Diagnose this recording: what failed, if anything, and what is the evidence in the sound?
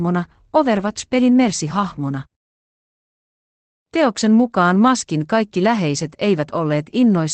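Network stage, lost packets rebuilt from error correction: rougher, noisier patches at 0.77–0.79, 4.87–4.89 and 6.01–6.11 s, where Opus played the next packets' low-bitrate copies.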